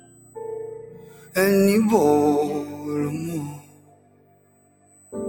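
USB whine runs throughout as a fixed 8 kHz tone about 20 dB below the sound, from the bus's 125-microsecond microframe current leaking through power or ground. A noise suppressor applied to this non-speech sound also runs throughout, mistaking steady content for noise and swinging the level by roughly 20 dB, so the sound pumps and thins. Sound cut by the noise suppressor is heard from 0.00 to 0.36 s (about 13 dB down), 0.86 to 1.35 s (about 10 dB) and 3.56 to 5.13 s (about 14 dB), where sustained parts and decays sink.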